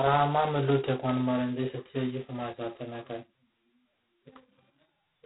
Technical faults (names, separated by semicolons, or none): G.726 ADPCM